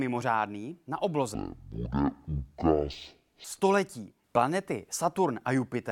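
From 1.34 to 3.44 s, stereo read as mono: interleaved channels play as one, halving speed, dropping pitch an octave; spectrograms show compressed, lowered harmonics.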